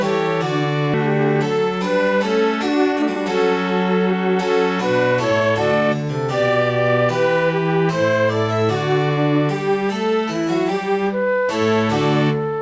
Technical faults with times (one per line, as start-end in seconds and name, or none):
0.94-0.96 skip ahead
2.69-3.16 jitter buffer speed-up
5.12-6.04 jitter buffer speed-up